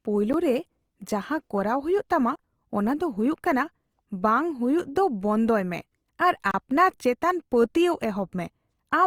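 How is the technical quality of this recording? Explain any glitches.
The recording has audible technical problems: a grainy, rough coding texture runs through the whole clip, and the speech cuts out three times.

The texture is most likely Opus compression. It sounds like the codec's music-style mode, which keeps each frequency band's energy and fills starved bands with folded or noise-like content. The damage is plainly audible: harmonics turn rough and grainy, at a level that fits a rate around 24 kbps. Unlike MP3 damage, it has few swirling or warbling holes in the spectrum, and the high end still extends to about 20.2 kHz rather than sounding muffled.

The three dropouts are blocks of digital silence, where stretches of samples were replaced by zeros, typically because the output buffer was not filled in time. The first, at 0.33 s, lasts 10 ms and comes across as a tick. The second runs from 2.36 to 2.39 s (about 35 ms) and the third from 6.51 to 6.54 s (30 ms), and both are heard as short holes. 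Each one starts and ends abruptly, with no fade. That dead-flat silence is what separates these from codec concealment, which would fill a gap with smeared or repeated sound instead.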